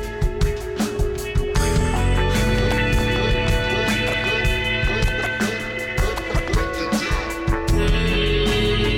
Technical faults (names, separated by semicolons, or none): none